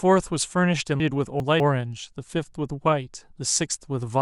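From 1.0 to 1.6 s the speech turns jumbled: chunks out of order. A 200 ms block arrived two chunks late and plays after its successors. Unlike a dropout, nothing is missing; the same sound is simply reshuffled.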